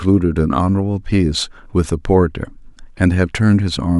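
Speech with no audible faults.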